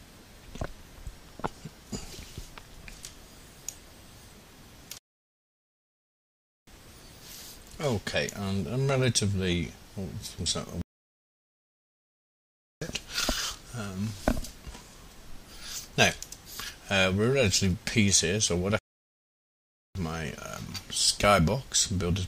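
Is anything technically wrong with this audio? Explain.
Yes. Three playback stalls cut the sound mid-flow: 4.98 to 6.67 s (about 1.7 s), 10.82 to 12.82 s (2.0 s), and 18.79 to 19.95 s (about 1.2 s). Each is dead silence before the audio resumes, likely from the player starving for data or its thread blocking.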